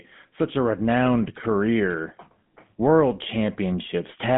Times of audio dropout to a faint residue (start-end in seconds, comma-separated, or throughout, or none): none